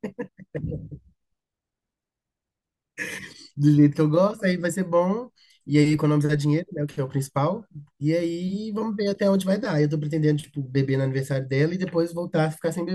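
No technical faults can be heard anywhere in the recording.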